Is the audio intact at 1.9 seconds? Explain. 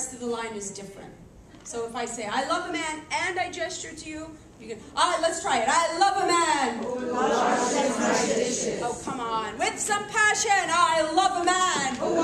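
Yes, the audio is intact at 1.9 seconds, with no dropout, click, distortion or other fault audible at that point.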